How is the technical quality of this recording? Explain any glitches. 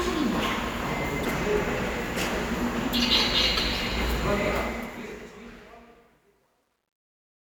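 The recording has two faults: a pair of brief glitches and a gritty fade-out.

Damaged data in a compressed stream appears at 1.21–1.25 s and 3.54–3.59 s: corrupted frames derail the decoder, causing a brief glitch.

Truncation distortion on a fade runs from 4.48 s to the end, worst after 5.37 s. Without dither, the fade's tail, which fits roughly 11-bit resolution, turns grainy rather than fading smoothly like hiss.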